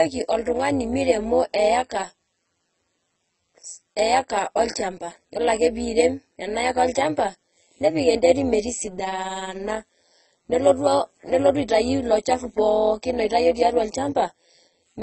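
A speech recording that carries two faults from start to finish. The sound is dull, and sibilants smear into a watery, warbling fizz. That points to AAC compression, likely AAC-LC at a very low rate such as 16 kbps. A plain low-pass filter would dull the sound without this swirling texture. Over the whole clip there is also overlap-add ripple: the level rises and falls by about 11 dB around 150 times a second, giving a metallic buzz with extra tones around each note. The frames were overlapped with windows whose gains do not sum evenly. A slower wobble in level would point to gain pumping, but this buzz is steady and locked to the frame rate.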